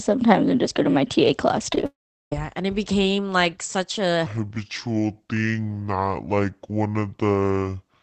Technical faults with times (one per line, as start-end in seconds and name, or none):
1.70-1.84 repeated packet loss (robotic sound)
1.86-2.32 long network dropout
4.26-8.02 section at the wrong speed